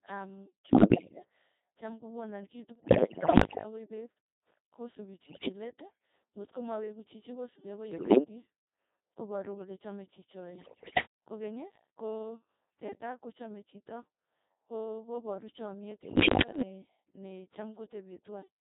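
Throughout, the speech has passed through the Codec 2 vocoder at 2.4 kbit/s. It transmits only pitch, voicing, level and a spectral envelope, then rebuilds the voice from sine waves without keeping the original waveform. Here the damage is heavy, leaving the voice robotic and buzzy.

On top of this, bit errors on digital voice radio corrupt the vocoder's frame parameters in six bursts. The first runs from 0.69 to 1.20 s, ending just before "cham kokonan kii". The next are at 2.76 to 3.64 s, then 5.26 to 5.48 s just before "leet ng'otko maweku chichi", and 7.92 to 8.24 s. Another runs from 10.56 to 11.06 s, right after "koporu kole chame", and the last from 15.92 to 16.62 s. Error rates range from a few percent to roughly fifteen percent and make pitch, loudness and tone colour lurch from frame to frame, turning the voice into warbles, bleeps and gibberish. The bursts at 2.76 and 10.56 s are the most garbled.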